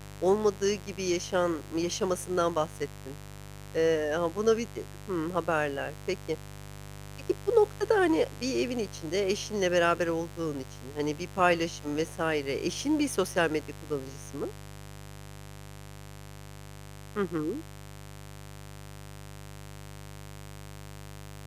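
Speech recording with mains buzz throughout: a steady raspy 50 Hz buzz, roughly 15 dB below the speech, whose sharp switching spikes spread harmonics up into the kilohertz range.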